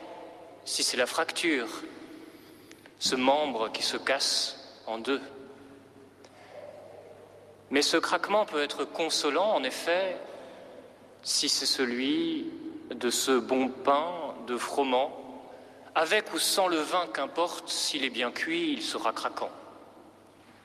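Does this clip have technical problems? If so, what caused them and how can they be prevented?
No, the signal holds steady throughout, with no audible technical problems to trace or prevent.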